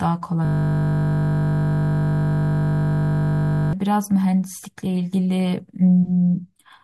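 At 0.45 s the speech stops and a system hang loop takes over, lasting until 3.73 s. The computer or audio driver froze. The sound hardware kept replaying the same small stretch of its ring buffer. That stretch is 20 ms long, which fits a 20 ms buffer. It repeats exactly, well over a hundred times. Because the piece is so short, it sounds like a steady buzz at 50 Hz rather than a stutter.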